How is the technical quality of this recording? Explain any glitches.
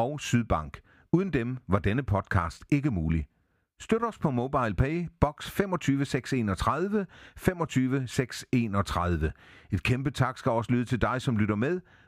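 No glitches or technical faults can be heard here.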